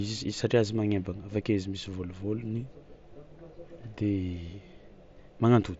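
No technical faults occur anywhere in the speech, which comes over a Bluetooth mSBC headset link with nothing above 7.7 kHz.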